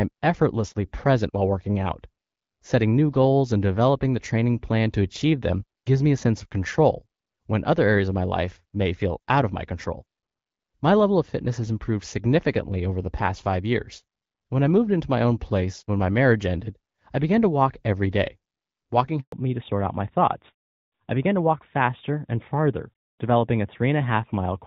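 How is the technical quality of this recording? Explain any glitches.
The speech sounds like a wideband phone call with light codec texture, consistent with HD Voice at around 12.65 kbit/s, and two linked faults come near the end.

From 19.20 to 19.32 s there is a handover gap: the call moved between networks and no speech frames arrived for about 120 ms. The sound drops out abruptly to silence and resumes, unlike packet-loss concealment, which would smear or repeat the preceding sound.

From 19.32 s to the end there is a fallback to narrowband. After the handover the call settled on an older codec, consistent with narrowband AMR. Everything above 4 kHz is gone, so the speech turns duller and rougher. Unlike a lowpass filter applied to the whole recording, the change arrives as a sudden step right at the gap.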